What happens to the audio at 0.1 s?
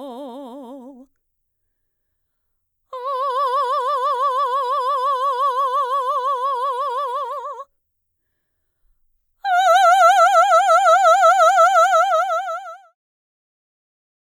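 At 0.1 s the music is intact, with no fault to be heard at that moment.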